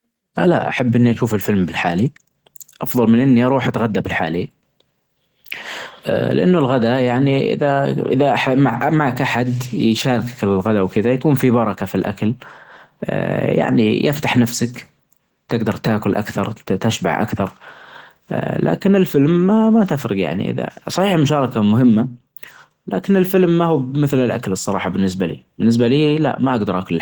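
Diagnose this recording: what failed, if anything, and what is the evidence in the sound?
The codec stage failed: Opus voice compression runs throughout at a rate that sounds like about 16 kbps, in hybrid mode with 20 ms frames. SILK's coarsely coded excitation makes the speech plainly hoarse and slightly robotic, while the thin CELT layer keeps content reaching about 20.2 kHz.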